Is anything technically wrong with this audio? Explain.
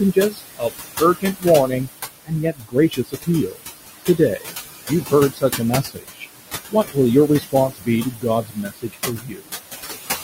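Yes. Noise suppressor artifacts run throughout. Treating the room noise (about 8 dB under the speech) as steady, it cuts that background by about 16 dB frame by frame, so the noise sinks between the words and rises under them.

Speech cut by the noise suppressor occurs at 0.13–1.89 s, 2.25–3.61 s, 4.05–4.47 s, 4.88–6.27 s, 6.69–6.97 s and 7.28–9.52 s. Soft speech mistaken for noise drops by up to about 21 dB, so consonants and word endings sound swallowed. The longest stretch of this is the last one.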